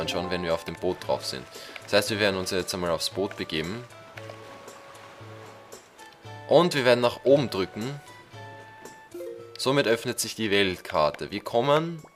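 Nothing stood out on listening; no point in the recording drew attention to itself as a technical problem.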